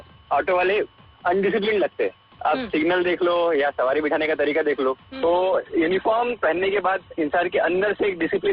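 From 5.19 s to the end, the audio abruptly turns dull, with nothing above 4.4 kHz and no gap: an adaptive stream at a lower bitrate, which fits a drop to a much lower bitrate.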